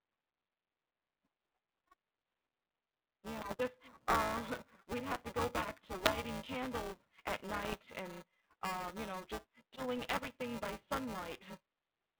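Buffer tearing runs through the whole speech: a steady buzz at 375 Hz, which fits a 128-sample buffer, present only while speech sounds. About a fifth of each period replays audio a few milliseconds old, so unlike random crackle the rattle is strictly periodic.

Bit errors on an ADPCM link strike at 3.41 to 3.56 s, 6.0 to 6.19 s between "to go back to" and "candles at", 7.64 to 7.84 s between "candles at" and "and um you know", and 9.96 to 10.28 s after "um you know just". Each is a rough burst of pops with brief level jumps. Unlike a single click, the disturbance rings on because the decoder's step size and prediction are thrown off. The narrow telephone band of the codec underlies all of it.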